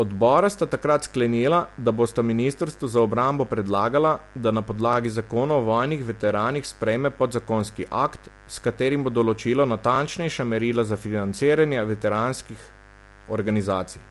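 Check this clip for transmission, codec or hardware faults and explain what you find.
Three faults are audible: a continuous mains buzz, compression damage across the whole clip, and a single overlapping-chunks stutter near the five-second mark.

The mains buzz runs from start to finish. Sharp switching spikes, from something like a dimmer, a rectifier or an unshielded lead, enter the signal twice in every 50 Hz cycle. That produces a raspy, steady buzz sitting roughly 25 dB below the speech. On a spectrogram it appears as evenly spaced horizontal lines at multiples of 50 Hz, climbing well into the kilohertz range. It is visible even in the gaps between phrases.

The speech sounds rough and grainy throughout, and the damage is plainly audible. Hiss fills the spaces between the pitch harmonics, and nothing is present above 11.6 kHz. This is likely low-delay AAC compression of the AAC-ELD kind used in video calls, at a rate that fits about 32 kbps. 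Its short frames cannot separate the harmonics cleanly, and the bit budget runs out. On a spectrogram the harmonic lines look smeared and speckled, with a hard ceiling at 11.6 kHz.

At 4.93 to 4.96 s, overlapping chunks cause a brief stutter. The audio was handled in 5 s pieces, and the next piece began before the previous one had finished. As a result, 25 ms of sound plays twice at the join. It is heard as a quick click or hiccup. In the waveform, a short stretch repeats right at the boundary, with a small discontinuity where the copies meet. A spectrogram shows a thin vertical seam there.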